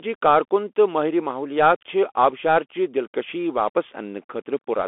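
Speech carried through a Bluetooth CVSD headset codec for the whole clip, with the band held to roughly 250 Hz–3.5 kHz. The one-bit delta coding, which fits a 64 kbit/s stream, lags on loud high content, so sibilants turn scratchy over a granular hiss.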